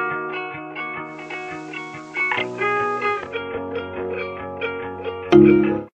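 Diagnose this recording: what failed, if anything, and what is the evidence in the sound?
The failure is upstream in the receiver: digital radio blending to analogue. From 1.02 s to 3.42 s the radio falls back to FM, with a 308 ms cross-fade each way, a level dip of about 1 dB, and hiss sitting roughly 30 dB down.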